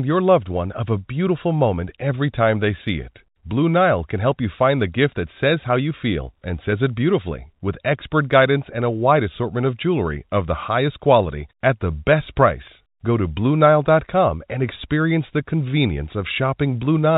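No technical faults can be heard anywhere in the speech. The telephone coding path is audible only as the narrow band that stops at 4 kHz, with a faint hiss that rises and falls with the level.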